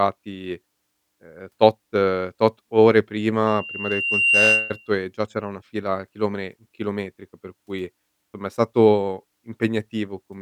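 A microphone was picking up its own loudspeaker, and at 2.8 kHz the loop gain rose above one, causing loudspeaker feedback squeal from 3.47 to 4.93 s. The tone swells over about a second into a piercing whistle, ending up about 5 dB louder than the speech.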